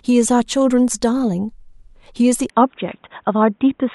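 At 2.5 s the speech abruptly loses its top end and stays that way to the end, with nothing above about 3.8 kHz. The change has no gap, and the level holds roughly steady, but the tone turns duller and boxier, and a faint new noise floor appears well below the speech. This points to an input switched to a poorer device, most likely a different microphone or a headset's narrowband call profile taking over mid-recording.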